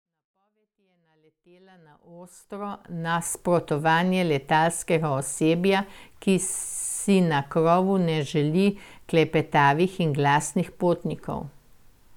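Nothing is technically wrong with this speech recording, and the smooth fade-in over roughly the first 3.3 s is an ordinary editing choice.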